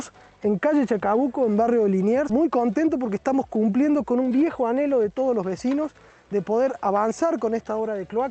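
Skip ahead at 2.29 to 2.31 s: playback jumps forward with no filler, and roughly 0.4 s of sound never arrives. That stretch was dropped in transit or discarded when the jitter buffer overflowed while later audio was already queued. The sound on either side of the cut is joined almost directly, so the material simply lurches ahead. The call path's coding noise and top end near 8 kHz, which fits Opus at around 32 kbps, continue through the join.

Jitter buffer speed-up from 2.40 to 3.16 s and again from 4.16 to 5.89 s: the buffer was holding more audio than its target, so the receiver trimmed short pieces of one or a few pitch periods, over and over, to bring the delay down. The first stretch runs at 105% and loses about 50 ms. The second runs at 110% and loses about 150 ms. The pitch stays put while the timing rushes, so the sound feels hurried, more noticeably in the second stretch.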